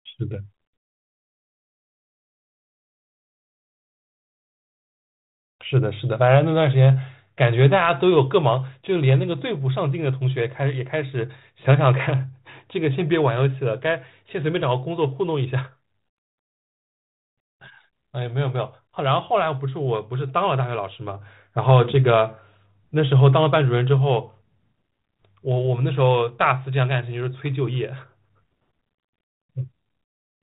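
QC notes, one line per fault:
No faults found in this speech; the G.726 ADPCM path at 32 kbit/s is working as expected, band-limited to 4 kHz with only light coding noise.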